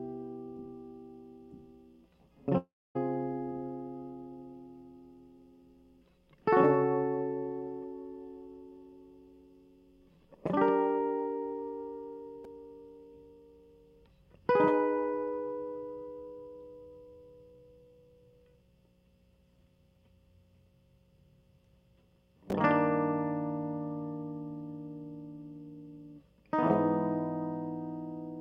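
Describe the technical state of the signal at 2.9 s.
At 2.9 s the music is silent. From 2.57 s the last sound smears into a fading buzz, then nothing until 2.97 s, with about 0.38 s of music skipped. A long network dropout is the likely cause, the receiver padding briefly before falling silent.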